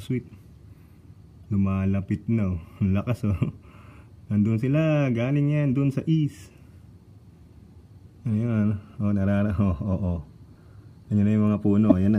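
At 1.44 s a corrupt frame is decoded, and a very faint glitch is heard. Flipped bits in one compressed frame sent wrong gains or misread codes to the decoder, which played them anyway. At 11.89 to 11.92 s a second corrupt frame gives a loud glitch. Each burst lasts about one frame and has a misplaced spectral colour, unlike the silence of a dropout or the flat broadband tick of a click.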